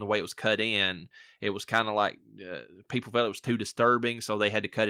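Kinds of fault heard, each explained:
No kinds of fault are heard in this speech.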